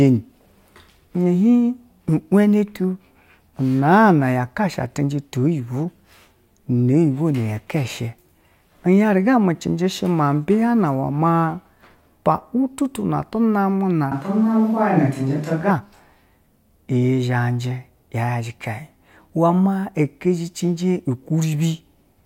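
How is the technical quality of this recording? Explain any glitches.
There's one glitch, a short stretch where the sound suddenly turns distant and roomy. From 14.12 to 15.70 s, about 1.6 seconds, the speech goes hollow and thin in the low end, with more room around it and a background noise floor roughly 30 dB under the speech. The loudness barely changes, and it snaps back just as abruptly. That's likely a switch to a distant microphone, with the close mic dropping out and a farther one covering the gap.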